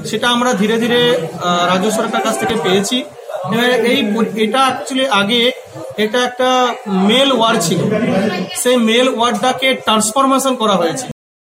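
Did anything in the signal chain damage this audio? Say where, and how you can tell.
Yes. In the analogue wiring, a single loud pop at 2.50 to 2.52 s was most likely a voltage pulse from a plug, switch or static discharge entering the line. It lands as one sharp thump, roughly 10 dB above the surrounding sound, which continues unbroken beneath it.

At the buffer or storage stage, the final buffers were never written, giving a cut-off end at 11.11 s. The audio stops abruptly mid-sound and falls straight to digital silence with no natural decay, so whatever was sounding is truncated rather than fading out.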